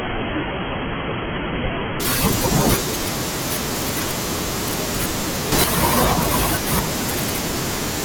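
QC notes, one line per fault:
0.0–2.0 s, adaptive stream starting at a low bitrate: for the first 2 s the speech has nothing above 3.4 kHz and carries noticeably heavier codec artefacts, then full treble returns abruptly with no gap in the audio. The narrow band and artefact level point to an AAC-LC stream around 16 kbit/s at start-up, stepping up to one near 96 kbit/s once the player had measured the connection and switched to the better version.
5.52–5.64 s, sudden gain jump: the speech and the background noise rise together by about 7 dB over this short span, with no gradual fade into the new level. Because the noise floor moves in step with the speech, the change is in the signal chain rather than in the source itself. The likely cause is a digital gain setting or bit shift applied without a ramp, so the level changes from one sample to the next.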